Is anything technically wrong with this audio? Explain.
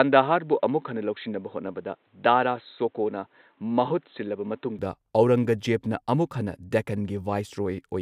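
Yes. From 0.0 to 4.79 s, the input was likely switched to a poorer device, one passing nothing above 4.1 kHz. The speech sounds dull and boxy until it opens up at 4.79 s, with no gap at the change, similar loudness and a faint added noise floor.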